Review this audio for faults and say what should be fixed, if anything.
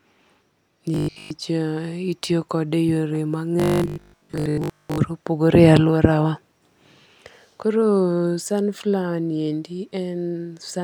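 The speech turns into a rigid, metallic buzz from 0.94 to 1.30 s and again from 3.60 to 4.98 s, following the words only loosely, with a fixed pitch near 50 Hz. This robotic sound from repeated short buffers is likely caused by audio arriving too late, so the software loops the last block, which fits a 20 ms buffer, while most of the real audio is skipped. Increasing jitter buffering or the delivery priority of the audio stream would prevent it.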